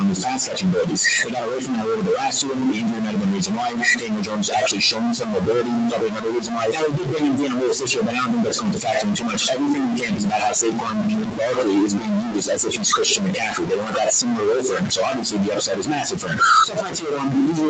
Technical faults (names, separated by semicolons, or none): stuck bit; noise suppressor artifacts; speech cut by the noise suppressor